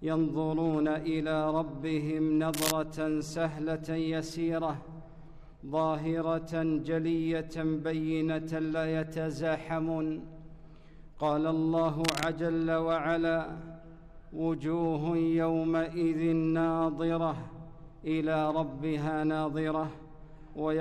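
At 2.54 to 2.72 s, cable scratch noise rasps about as loud as the sound. At 12.04 to 12.27 s it returns, somewhat quieter. A worn connector being moved is the likely cause.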